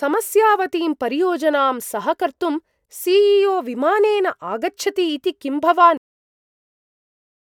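Right after "इति किं", at about 5.97 s, the speech just stops dead. That's a cut-off end: the final stretch of audio never got written out or played, so the recording ends mid-sound instead of finishing naturally. There's no decay or tail at all. It drops straight into digital silence and stays there for roughly the last 1.6 s, which makes it feel like someone yanked the plug rather than the talker wrapping up.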